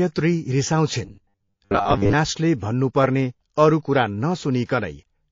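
Heavy encoding, likely MP3 compression at a low bitrate around 32 kbps, strips the treble and toggles weak detail on and off, leaving the speech watery and swirly throughout. From 1.05 to 2.13 s, too-sparse delivery means about half the audio is likely replaced by repeated short buffers, whose 100 Hz repetition rate suggests 10 ms blocks and produces a robotic sound, a rigid metallic buzz. At 4.66 to 4.69 s, a sharp attack late in a 72 ms block, with no short blocks used, causes pre-echo: noise about 16 dB up smears across 31 ms before it, a brief hiss.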